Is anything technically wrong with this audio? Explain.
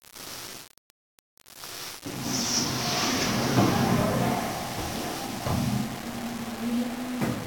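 Yes. Low bit depth without dither runs throughout: a grainy distortion about 15 dB below the signal that tracks the sound, likely from rounding to around 5 bits. Unlike dithered noise's steady hiss, it roughens quiet sounds.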